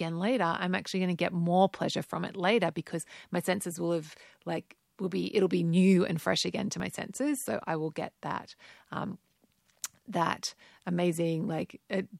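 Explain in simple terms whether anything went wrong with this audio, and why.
At 6.8 s the speech jumps forward by roughly 10 ms, with no gap of silence. This is a dropped buffer (overrun), likely caused by the recording software not collecting a block of samples before the hardware overwrote it, so the surrounding sound joins directly.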